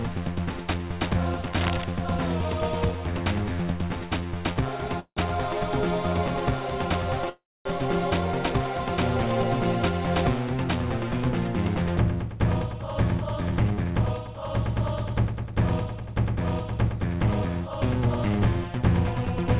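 From 1.47 to 1.84 s there's a burst of dense, uneven scratching over the sound, sitting roughly 10 dB under it. That's cable scratch noise, likely a worn cable, connector or control being moved so its contact resistance jumps around rapidly.

At 4.53 s comes a short stall from a late packet. A packet didn't show up on time, the jitter buffer emptied, and the receiver stretched the last sound for about 23 ms before carrying on from the same spot. You hear a slightly held, buzzy moment, with nothing lost.

Then there are two call audio freezes, at 5.00 to 5.20 s and 7.30 to 7.68 s. Each time, the last sound is continued as a fading buzz before dropping to silence: about 90 ms of silence in the first and about 250 ms in the second. The audio then resumes where it stopped, so gaps of 170 ms and 358 ms are inserted, with nothing cut out. The likely cause is packets held up in transit, draining the jitter buffer.

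Finally, there's jitter buffer speed-up from 12.35 to 16.38 s and again from 17.60 to 18.54 s. The buffer was holding more audio than it wanted, so it trimmed tiny pitch-period slices over and over, around a third of a second in the first stretch and a much smaller amount in the second. Playback runs about 8% fast at unchanged pitch and sounds a bit hurried. All of this rides on the G.711 mu-law call path, which is why nothing reaches above 4 kHz.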